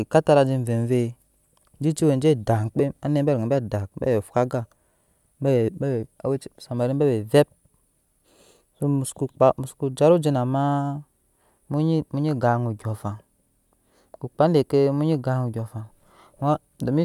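No technical faults are audible anywhere in this recording.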